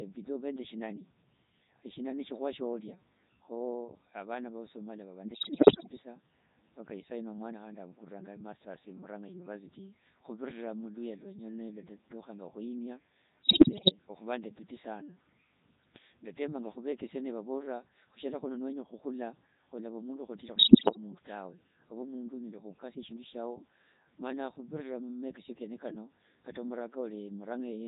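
The whole clip passes through the Codec 2 vocoder, which fits its 3.2 kbit/s mode. The voice is rebuilt from sine waves, so the speech sounds robotic and buzzy.

Bit errors on digital voice radio hit at 5.34 to 5.92 s, 13.44 to 13.92 s and 20.56 to 20.97 s. Corrupted frames scramble pitch and tone into warbling gibberish, worst in the first and third bursts.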